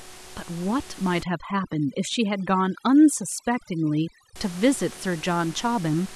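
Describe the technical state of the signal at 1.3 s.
At 1.3 s, overdone noise removal, running from 1.23 to 4.36 s, is suppressing frequency bands near its noise estimate, cutting quiet speech detail with them. The background drops and breaks up into twinkling specks.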